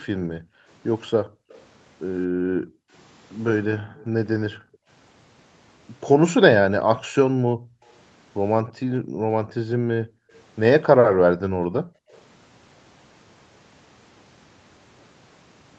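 A speech recording with two call-path faults. Background gated by the echo canceller appears from 0.0 to 4.88 s and again from 7.07 to 12.1 s. The room sound is pulled down by as much as about 40 dB, for roughly two seconds in each stretch, as the canceller clamps the microphone while far-end audio plays. Faint delayed copies of the speech, about 30 to 40 dB below it and 226 to 232 ms late, surface briefly at 1.51, 3.97, 7.88 and 12.1 s. This is likely echo leak, where the canceller lets residual loudspeaker pickup through and it is sent back. The audio is band-limited to 8 kHz by the Opus call path.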